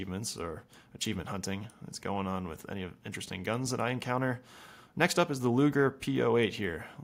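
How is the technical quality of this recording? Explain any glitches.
No technical faults are audible.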